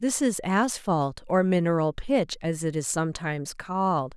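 No technical faults are audible.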